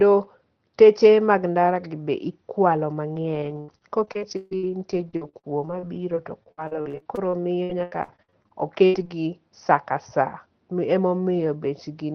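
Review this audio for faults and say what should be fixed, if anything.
The speech turns choppy and robotic from 3.13 to 9.11 s, starting after "mag ndara be ikwalo" and clearing by "saa ka saa". This is repeated packet loss: over this stretch the audio drops out in 35 short holes, the longest 142 ms, and each is patched by stretching the last sound. About 22% of the span, roughly a second in total, is rebuilt this way, which makes the speech sound broken. Elsewhere the call path is band-limited to about 6 kHz, as expected from a call codec. To prevent the dropouts, stabilise the network link or enlarge the jitter buffer and enable forward error correction so fewer packets arrive too late.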